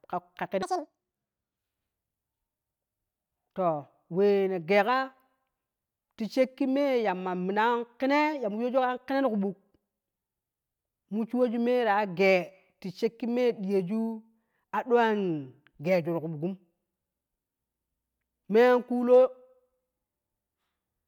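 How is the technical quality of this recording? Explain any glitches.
One glitch stands out in this speech recording. Audio read two samples at a time (double speed) occurs from 0.63 to 1.57 s. Each pair of samples is taken as one frame, as if the data were stereo or twice as wide, so the speech runs at double speed and jumps a full octave higher.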